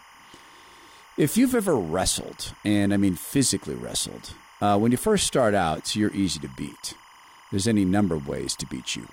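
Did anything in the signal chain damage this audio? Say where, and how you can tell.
Yes, there's timecode bleed in the analogue wiring. All the way through, a steady chirping warble sits behind the sound, flipping between tones near 1 and 2 kHz, about 25 dB down. That's 25-frame linear timecode leaking in from a neighbouring cable or track.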